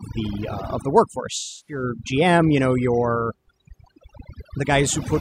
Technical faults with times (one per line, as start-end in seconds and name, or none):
0.00-5.21 overdone noise removal
1.37-1.83 AAC frame loss with concealment